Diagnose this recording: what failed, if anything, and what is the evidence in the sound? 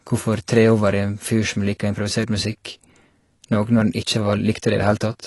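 The codec stage likely failed through low-bitrate AAC compression, around 32 kbps: the speech sounds dull and smeared throughout, with nothing above 11.5 kHz.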